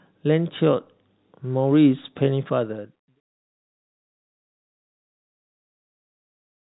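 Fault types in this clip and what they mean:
Nothing stood out as a fault on listening to this speech.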